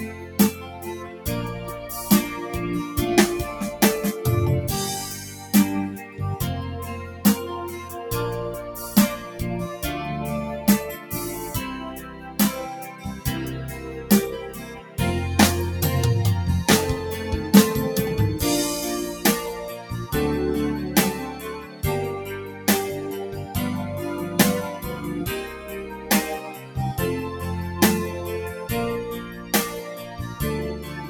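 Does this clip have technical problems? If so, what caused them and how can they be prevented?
Yes. A noise suppressor designed for speech was left running on this non-speech audio throughout. It treats steady tones, ambience and decays as noise and pulls them down while sharper onsets pass, so the level swings by roughly 10 dB and the sound pumps and thins. Disable speech noise suppression, or switch it to a music or original-sound mode, whenever non-speech audio is being captured.

In seven passages the suppressor judged the sound to be noise and cut it harder: 0.07–1.26 s, 5.27–7.91 s, 10.99–13.25 s, 14.53–14.98 s, 21.33–23.55 s, 24.96–26.76 s and 29.2–31.1 s. Sustained and fading parts sink by about 7 to 8 dB at their deepest and their tails shorten. Turning the suppressor off for this kind of material prevents these dips.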